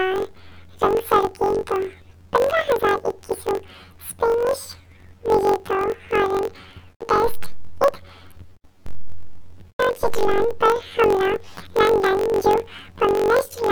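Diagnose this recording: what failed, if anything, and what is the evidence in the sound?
A sample-format conversion fault read planar audio as interleaved: each roughly 21.33 ms block, fitting 1024 samples, plays twice at double speed, so the speech sounds an octave high throughout with a 46.9 Hz flutter.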